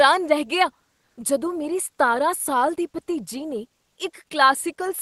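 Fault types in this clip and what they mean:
Comfort noise in place of the background: from 1.05 to 1.17 s, just before "ਜਦੋਂ ਮੇਰੀ ਸਤਾਰਾਂ ਸਾਲ", the real background, about 49 dB below the loud parts, gives way for 120 ms to steady, featureless synthetic noise about 2 dB different in level, likely from Opus discontinuous transmission pausing during silence.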